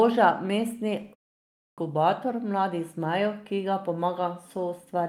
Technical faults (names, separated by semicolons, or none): clipped start after a pause